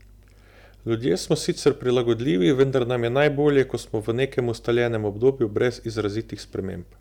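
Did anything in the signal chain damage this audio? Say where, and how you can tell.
Yes. Hard clipping, at a converter or sample-format stage. Peaks overshoot its limit by about 3 dB and are cut flat. The flat tops add high harmonics, heard as crackle at 1.66–1.69 s before "prilagodljivi vendar nam je", at 2.47–2.63 s, and at 3.22–3.61 s before "ko smo v".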